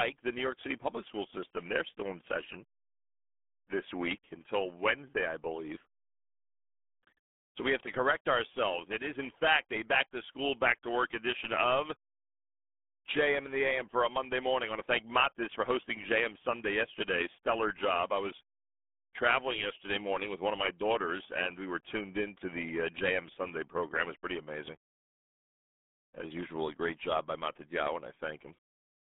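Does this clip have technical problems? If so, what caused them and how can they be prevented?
Yes. The speech carries RealAudio 14.4 codec damage from start to finish. Nothing survives above 3.8 kHz, the band sits roughly between 200 Hz and 3.5 kHz, and the heavy gargly, muffled coding smear fits RealAudio 1 at about 8 kbit/s. A plain telephone-band filter would narrow the sound the same way but leave it clean. Here, the coarse low-rate coder adds wobbling, bubbly distortion on top of the narrow band. To prevent it, record or archive from the original source with a modern wideband codec at a generous bitrate, and don't transcode from dial-up-era RealAudio files.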